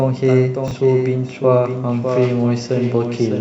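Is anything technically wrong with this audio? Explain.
Yes. There are two faults.

A doubled audio track runs through the whole speech clip. A second full-band copy of the sound trails the original by roughly 0.7 s, about 5 dB quieter. It likely comes from the same signal being captured again by a slower path, or from an edit holding two copies out of step. The copy is dry, with no decay or room colour. It sounds like a flat, distinct repeat under everything, not natural reverb.

Chunks are out of order between 0.68 and 0.71 s. The audio there moves in 10 ms pieces. One chunk plays two chunks late, after the ones that should follow it. Nothing is missing, but the sequence is wrong. This creates three hard joins in about 30 ms. The result is a brief garbled, jumbled moment.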